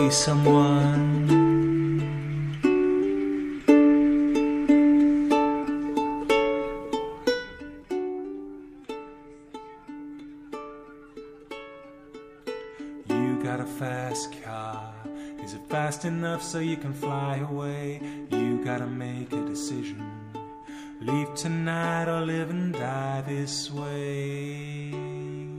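From 7.25 to 8.08 s a fine ticking zips along the sound as it drops by roughly 10 dB. This is zipper noise: the gain moves in unsmoothed 1 dB steps, around ten a second, each leaving a small click.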